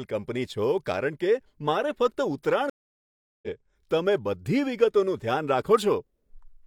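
At 0.78 s a single sharp click cuts through the speech, brief enough to register only as a tick with no audible gap. This is most likely dropped samples: a fraction of a millisecond of the stream went missing, so the waveform leaps straight from one value to a later one. That abrupt step is what produces the click, a thin vertical stroke across the whole spectrum.

From 2.70 s the speech stops dead, and about 0.73 s of silence follows before sound fades back in, the disturbance ending at 3.48 s. When it comes back, the speech picks up roughly 0.7 s further on than where it broke off, so that stretch is simply skipped. This is a stream reconnect. The connection dropped, the player fell silent, then rejoined the stream and started a new decoder partway through, landing later in the live feed.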